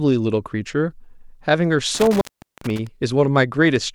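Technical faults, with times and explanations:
1.95 to 2.87 s, intermittent contact: a loose plug or cable connection in the signal path opens for a moment within this stretch, and the gap lasts about 0.40 s. When the contact breaks, the speech drops out abruptly and only a faint hiss remains. As it breaks and remakes, the contact jumps between open and closed, which puts a brief crackle at both edges of the dropout.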